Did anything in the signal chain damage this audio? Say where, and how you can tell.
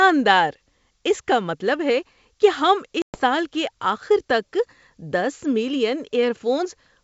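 Yes. Packet loss on an ADPCM call, a network-stage fault, at 3.02 to 3.20 s: a hard-edged 120 ms hole of silence, then speech returns slightly distorted. The decoder's predictor and step size lost sync with the sender's and need tens of milliseconds to recover.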